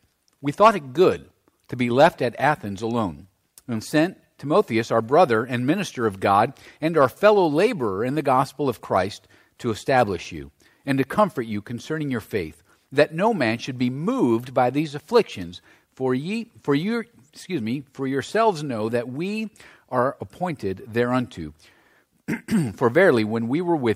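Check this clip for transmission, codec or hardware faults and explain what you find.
Nothing in the signal points to a transmission, codec or hardware problem; it holds steady throughout with no audible disruption.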